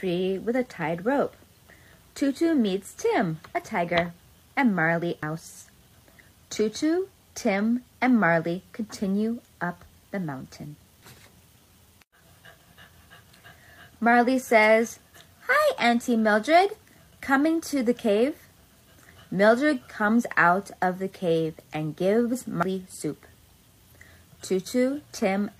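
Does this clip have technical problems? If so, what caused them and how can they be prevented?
Yes. At 5.23 s and 22.63 s the sound skips abruptly, with about a fifth of a second missing and the two sides butted together. This is likely audio missing between chunks, lost while the recorder closes one 6-second chunk and opens the next. Buffering across chunk boundaries, so capture continues during the handover, prevents it.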